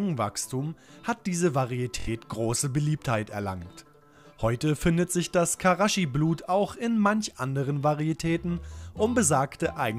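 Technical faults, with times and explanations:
2.00 to 2.09 s, Bluetooth stutter: about 70 ms of the stream never arrived in time, so the receiver kept replaying its most recent short buffer until fresh data turned up. The repeated slice gives a brief buzzing, machine-gun flutter in place of the real sound, and when playback resumes it jumps ahead as if the audio had carried on underneath. The gap length fits roughly three lost packets of about 23 ms each.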